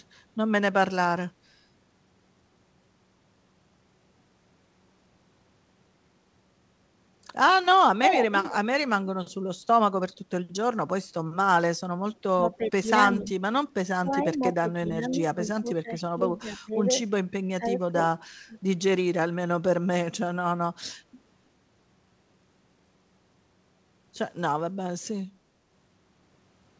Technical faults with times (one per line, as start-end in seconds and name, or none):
8.02-8.56 echo leak
12.37-12.85 speech suppressed in double talk
13.09-13.27 echo leak
13.16-13.31 speech suppressed in double talk
14.04-16.78 speech suppressed in double talk
17.53-17.96 speech suppressed in double talk
18.47-18.56 speech suppressed in double talk